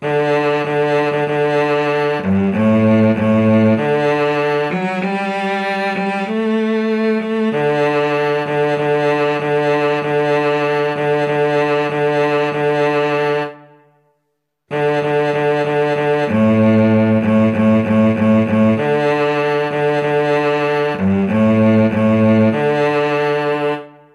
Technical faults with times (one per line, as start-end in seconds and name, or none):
none